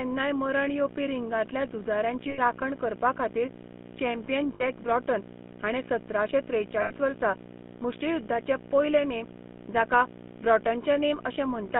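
Video or display buzz runs from the start to the end of the clip: a screen or video cable is coupling its 60 Hz field rate into the audio, so a hard-edged buzz with gritty hash above it sits under the speech. It is strong, only about 10 dB below the speech itself, so it never drops out of the background and fills every pause.

The GSM full-rate codec also affects the whole clip, and its damage is plainly audible. This coder rebuilds the voice from a vocal-tract model excited by regularly spaced pulses, keeping only a sparse fraction of the excitation, and the result fits a 13 kbps GSM full-rate stream. The speech has a buzzy, gravelly roughness. It is confined to a telephone band of about 150 Hz to 3.5 kHz, so it sounds thin and dull.

Lost GSM frames occur three times. From 2.30 to 2.39 s, just before "करपाखातीर चॅम्पियन", the decoder fills the gap by repeating the last good frame's settings. 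This freezes the sound into a brief rough, metallic ring, which fits about four 20 ms frames. The same ring recurs from 4.54 to 4.63 s, between "करपाखातीर चॅम्पियन" and "ब्रॉटन हाणें सतराशें", where it is shorter and fits about three frames. It returns from 6.82 to 6.92 s, before "वर्सा मुष्टियुध्दाचे पयले नेम". Each gap is too short to fade fully to silence.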